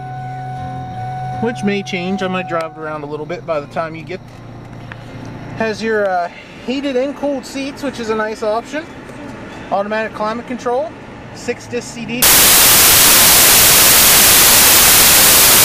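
From 12.22 s to the end, samples are built from the wrong bytes: misaligned or swapped byte order turns the low bits into loud white noise.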